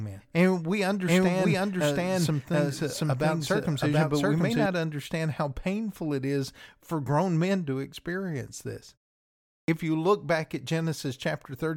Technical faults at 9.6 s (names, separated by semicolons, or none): clipped start after a pause